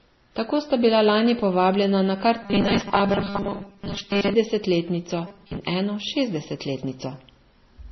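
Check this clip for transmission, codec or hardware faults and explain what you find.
Two faults are audible: one across the whole clip and one in two short stretches of the speech.

Transcoding between lossy codecs, throughout: the speech likely passed through several lossy codecs in turn, which fits a low-bitrate MP3 re-encoded via WMA and MP3 again. Each stage added its own smearing on top of the last, and nothing survives above 5.9 kHz, leaving a dull, gritty sound.

Robotic sound from repeated short buffers, from 2.42 to 4.34 s (right after "lani povabljena na kar") and from 5.27 to 5.57 s: the playback was likely starved and kept looping a 5 ms slice while most of the real audio was skipped. That fixed 200 Hz repeat imposes a rigid, metallic buzz that only loosely tracks the speech.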